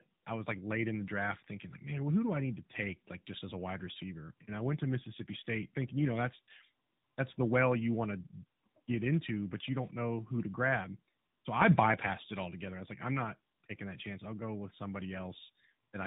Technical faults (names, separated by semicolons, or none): tandem speech coding